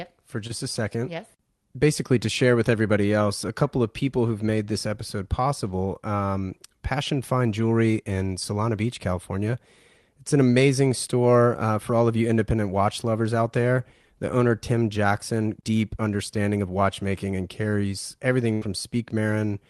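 Right at the start, around 0.47 to 0.51 s, there's a short concealed packet loss: about 20 ms of the call arrived too late, so the decoder patched in roughly 17 ms of extrapolated sound before blending back, heard as a tiny smear or wobble. Near the end, from 18.53 to 18.63 s, comes a burst of packet loss. About 80 ms went missing, and the receiver stretched the last sound for around 83 ms while fading it into a held buzz or hiss. Then it jumps ahead with that stretch gone. Throughout, the Opus call path tops out near 12 kHz, which fits a bitrate around 32 kbps.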